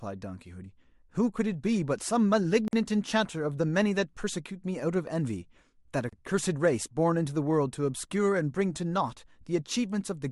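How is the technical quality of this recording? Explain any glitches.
The speech is interrupted twice by short dropouts. At 2.68 s a silence of about 50 ms opens, and at 6.09 s another of about 34 ms. Both are a gap at a join of encoded pieces. Each piece was encoded separately and the encoder's start-up delay and padding were left in at the seam. The speech stops, falls silent, then resumes where it left off. The edges sound smeared.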